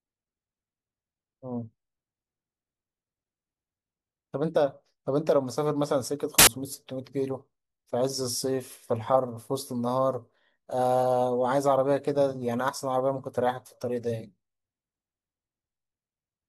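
At 6.39 s the speech gives way to a burst of loud, harsh broadband noise lasting about 84 ms, until 6.47 s. This is samples built from the wrong bytes: each sample's bytes were combined in the wrong order or offset, so the rapidly changing low-order bits became the dominant part of every value.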